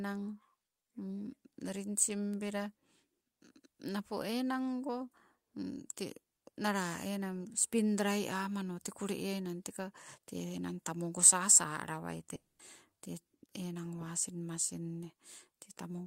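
At 12.35 s the speech stops dead and the last sound smears into a buzzy tail that fades to about 200 ms of silence. Speech comes back at 12.61 s with roughly a quarter-second missing, which is likely a long network dropout.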